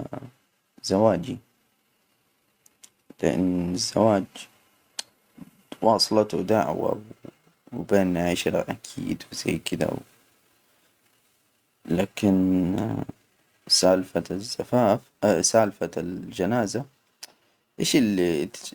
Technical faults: crude rate conversion

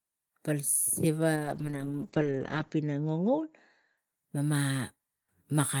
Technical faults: call bitrate drop

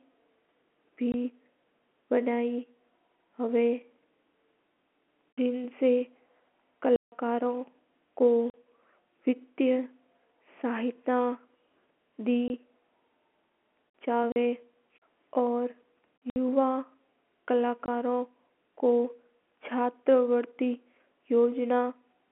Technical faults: packet loss filled with silence

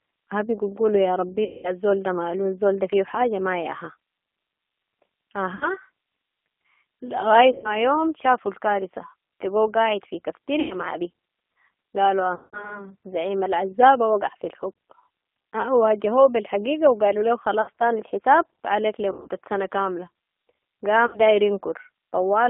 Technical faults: G.729 codec; VoIP packet loss concealed by the speech codec

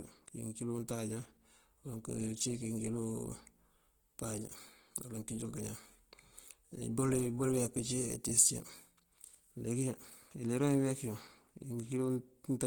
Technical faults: Opus compression

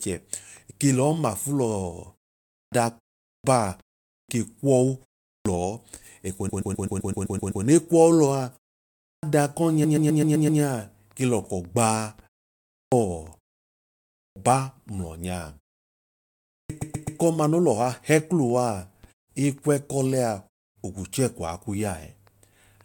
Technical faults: clipped start after a pause; repeated frames

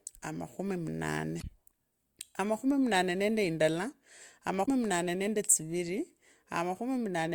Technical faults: damaged data in a compressed stream

